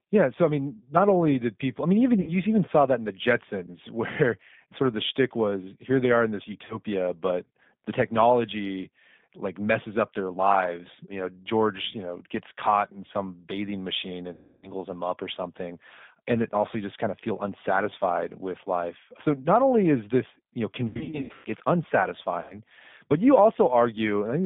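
G.729 codec damage runs through this 24-second speech clip: the 8 kbit/s coder rebuilds the voice from a vocal tract filter, a pitch predictor and a few pulses per frame, so it sounds plainly rough and synthetic, confined to a telephone band of about 150 Hz to 3.6 kHz. VoIP packet loss concealed by the speech codec is heard at 2.21–2.36 s (60 ms lost), 6.65–6.80 s (40 ms), 14.33–14.73 s (300 ms), 20.89–21.48 s (400 ms scattered over 560 ms, longest gap 120 ms) and 22.42–22.60 s (80 ms). At each point the decoder stretches its last pitch and filter into a fading buzzy tone or coloured noise, and the voice stays weak or distorted briefly after the audio resumes.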